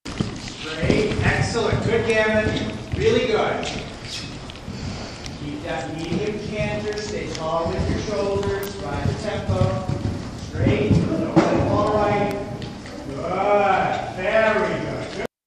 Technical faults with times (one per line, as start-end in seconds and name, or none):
8.63-8.66 electrical switching spike
12.31 electrical switching spike